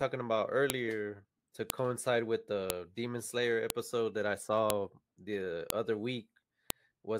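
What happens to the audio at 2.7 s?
At 2.70 s, a file header played as audio: a WAV header left in the joined stream plays as samples, giving a sharp, loud click over the speech.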